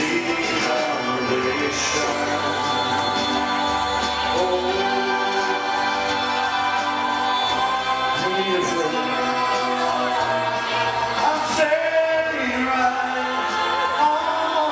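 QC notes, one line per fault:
No faults heard anywhere in the clip.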